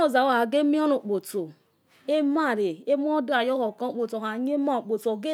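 No technical faults can be heard anywhere in the speech.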